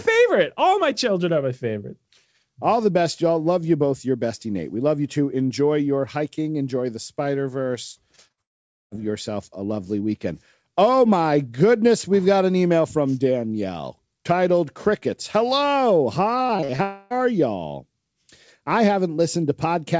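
Two short concealed packet losses come first, at 8.16 to 8.20 s and 8.28 to 8.32 s. Each time about 20 ms of audio failed to reach the decoder, and the receiver patched it by extending the preceding sound, leaving a brief smear or wobble.

A burst of packet loss follows straight on at 8.32 to 8.39 s. Roughly 60 ms went missing in a row, so the receiver held the last sound and let it fade. It comes across as a short buzz or hiss, with that piece of audio skipped.

From 8.41 to 8.93 s there is a long gap of about half a second, likely a network dropout. A continuation of the last sound gives way almost at once to silence. The audio resumes at "yourself a lovely weekend", with the stretch in between missing.

Repeated packet loss then hits 16.47 to 16.81 s, with five separate holes, the longest about 43 ms. Around a third of that span is filled by extending earlier audio, so the sound turns choppy, with fragments missing, over a band that stops at 8 kHz on this G.722 call path.

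A second long network dropout, likely, runs from 16.83 to 17.12 s, about 280 ms with nothing delivered. Here the patch never reaches silence. The last sound is stretched into a fading buzz or hiss for the whole gap before the real audio returns.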